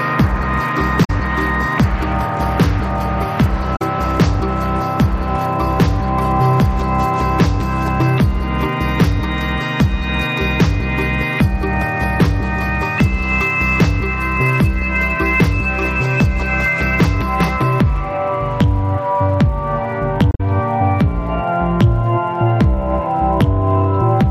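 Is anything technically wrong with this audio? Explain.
Yes. Damaged data in a compressed stream at 1.03 to 1.10 s, 3.75 to 3.82 s and 20.31 to 20.41 s: corrupted bytes make the decoder misread or reject frames and hunt for the next valid header, so the audio briefly breaks up for about 70 to 100 ms each time.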